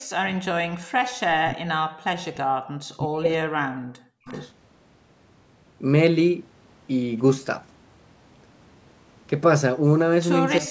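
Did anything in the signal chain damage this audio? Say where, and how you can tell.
Yes. Speech suppressed in double talk occurs at 0.0–0.36 s, 1.39–2.44 s, 2.69–4.29 s and 10.6–10.71 s, all in the call processing stage. In each span the talker's level collapses by roughly 40 dB, losing about a second and a half of speech in the longest stretch. The likely mechanism is an echo canceller that heard both sides at once, could not tell the near talker from loudspeaker echo, and clamped everything down.

Background gated by the echo canceller runs from 0.86 to 1.0 s, again in call processing. The room sound drops away by about 40 dB for roughly 150 ms and then comes back. This is the canceller's suppressor slamming the microphone path shut while the far end played through the loudspeaker, then releasing. The gap is audible as a brief hole in the ambience rather than in the speech.

An echo leak follows at 4.29–4.48 s, right where the longest suppression ends. 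A faint delayed copy of the voice arrives 356 ms late, around 30 dB below the live speech. The likely cause is a loudspeaker-side echo canceller that failed to remove all of what its microphone picked up, sending a residue back across the call. The band limit at 8 kHz from the call's microphone processing is expected, not damage.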